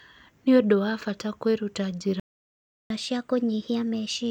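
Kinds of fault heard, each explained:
Playback stall: from 2.20 s to 2.90 s the speech cuts off mid-flow and the output falls silent for about 0.70 s before resuming. A gap like this most likely means the player's buffer ran dry or its audio thread was held up, leaving it nothing to send to the output until the data flow recovered and playback picked up again.
Catch-up at higher speed: from 2.90 s to the end of the clip the speech runs fast, at 1.15 times normal speed, and its pitch rises by about two semitones. Having fallen behind during the silence, the player works through its backlog by resampling, which compresses time and raises the pitch together. This clip ends before the speed and pitch settle back to normal.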